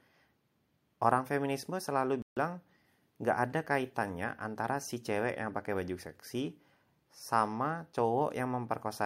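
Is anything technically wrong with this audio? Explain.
Yes. There is a playback stall from 2.22 s to 2.37 s, a gap of about 146 ms. The speech stops abruptly in mid-flow and the output drops to silence for that stretch before sound returns. The cause is likely the player running out of buffered data, or its audio thread being blocked briefly, so nothing reached the output until it recovered. It is heard as a sudden hole in the speech.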